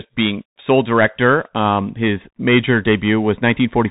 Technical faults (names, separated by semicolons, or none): Bluetooth CVSD headset codec